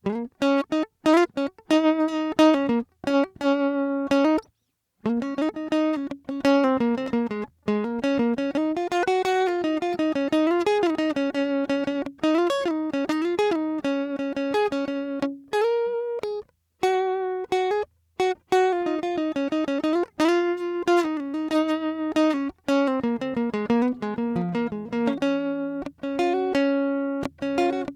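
Scattered short gaps run from 5.67 to 9.03 s in this music. Over that stretch, around twenty packets went missing or arrived too late, and the receiver filled each hole by extending the sound that came just before it. The patches total roughly 150 ms, about 5 percent of the span, and none is longer than about 15 ms. The result is a string of tiny ticks and smeared instants spread through the passage, and the stretch runs 36 ms longer than it should.

A jitter buffer slow-down follows from 9.27 to 10.21 s. The receiver's store of incoming audio had run low, or its target delay had just been raised, so it built a reserve by repeating single pitch periods, many times in a row. This adds 70 ms and plays the passage at 94 percent of its proper speed while keeping the pitch unchanged. The music drags and its sustained tones stretch out, and the repeated cycles can leave a faint wavering quality.

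A jitter buffer speed-up occurs from 12.10 to 13.50 s. Here the buffer was holding more audio than it targets, so the receiver cut out short slices one or a few pitch periods long, again many times in succession. Roughly 150 ms is removed, and the music plays at 110 percent speed with its pitch intact. The passage sounds rushed, and the beat briefly loses its steadiness as the tempo jumps forward.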